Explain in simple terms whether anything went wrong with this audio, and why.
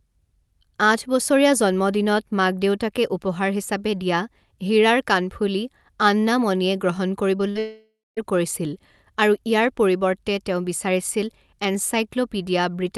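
Something did go wrong, just after the words "কাণফুলি আন্না মণিয়ে গ্ৰহণ".

First come two cases of short concealed packet loss, at 7.37 to 7.41 s and 7.51 to 7.57 s. Tiny pieces of the call arrived too late. The receiver patched each gap by stretching the last sound, so you hear a quick smear or wobble.

Then, from 7.59 to 8.19 s, the sound turns into a fading buzz. About the last quarter second is silent. The speech then returns with a piece missing. This is likely a long network dropout, where nothing arrived for about 0.6 s.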